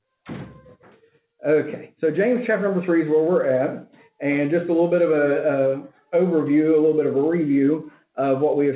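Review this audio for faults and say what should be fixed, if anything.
Between 7.9 and 8.17 s there's a spot where the noise suppressor cut the sound. It mistook the sound for noise and pulled it down by about 10 dB at the deepest, across roughly 150 ms, so the level sags briefly. The band stops at 4 kHz, which fits narrowband G.711 A-law on the call path. To prevent it, ease the suppressor's aggressiveness or slow its gain changes so sustained material isn't treated as background.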